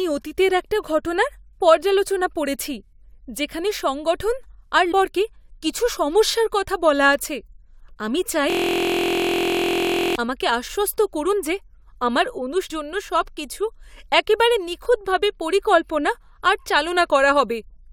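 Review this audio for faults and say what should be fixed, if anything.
Damaged data in a compressed stream shows up twice, at 4.91 s and 12.69 s. Each is brief, lasting about 12 ms and 14 ms. Part of the coded speech was corrupted there. The decoder could not read those frames. It lost sync and jumped ahead to the next valid frame header, so a tiny slice of audio is garbled or skipped. To prevent this, check the file or stream for integrity and re-fetch or re-encode from a clean source.

A system hang loop runs from 8.50 s to 10.16 s. One 23.2 ms piece of speech repeats exactly, over and over, for about 1.7 s. That cycle length fits a 1024-sample buffer. Repeating at 43 Hz, it is heard as a steady, low buzz instead of speech. The machine or driver stalled while the sound hardware kept replaying the same ring buffer. To prevent this, fix the driver or system stall and make playback stop or go silent when buffers are not refilled.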